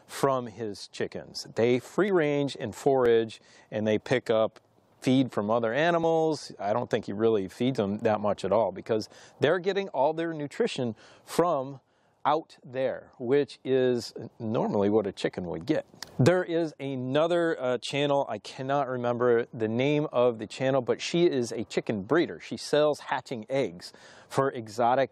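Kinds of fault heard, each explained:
Overlap between stream segments: time stamps on neighbouring one-second segments overlap, so the player discards 5 to 17 ms of real audio at each join. The waveform jumps, heard as brief clicks or skips at 2.08, 3.06, 6.04, 7.03 and 8.02 s.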